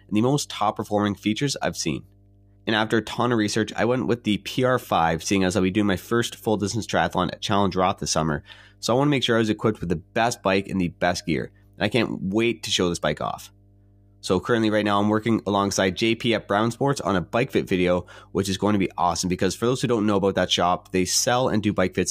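A steady low tone at 50 Hz runs beneath the speech throughout, roughly 30 dB below it: mains hum, from a ground loop or a nearby transformer coupling the power line into the signal.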